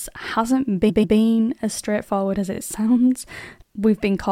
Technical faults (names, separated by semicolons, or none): repeated frames